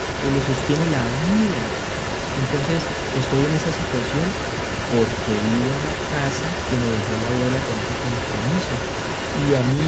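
It's a speech clip with an echo leak running through the whole thing, from 0 to about 9.9 s. A second copy of the talker trails the original by about 131 ms, close behind and not much quieter, only around 5 dB down. The likely cause is a far end on loudspeaker whose echo canceller let the pickup back through. The audio tops out at 8 kHz, consistent with an Opus call path.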